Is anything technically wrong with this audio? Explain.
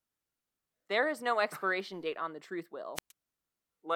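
Yes. At 2.95 s, right after "date on the truth", the speech is briefly swallowed: a short lift of hiss, then a hole of near silence of about 117 ms, and the sound returns by 3.12 s. This is a wireless microphone squelch dropout. The FM radio link from the transmitter weakened until the receiver's squelch judged the carrier too poor and muted its output. The gate reopened once the signal recovered, letting the speech back through.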